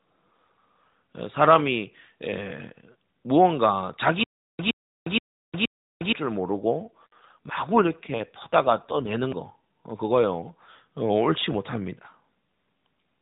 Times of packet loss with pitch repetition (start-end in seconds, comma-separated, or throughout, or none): none